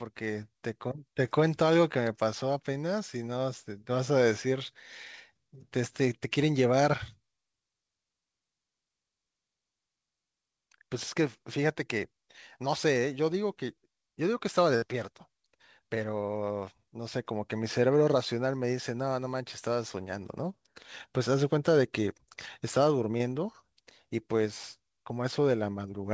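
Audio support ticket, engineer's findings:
Burst of packet loss, 14.76 to 14.84 s. Receiver stretched the last bit of sound for about 59 ms, fading it down, then jumped ahead. Roughly 60 ms of the speech is simply gone. Jitter buffer/concealment in the call's receiver, not the mic.

Short concealed packet loss, 23.18 to 23.22 s. Quick smear where about 20 ms got patched by extrapolating from what came before, then crossfaded back in. Same mechanism, smaller hole. Band tops out at 8 kHz, consistent with G.722 on the call path.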